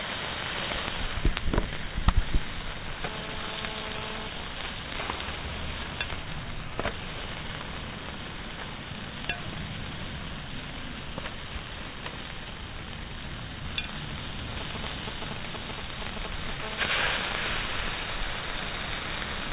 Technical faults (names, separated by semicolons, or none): GSM signalling bursts; GSM phone buzz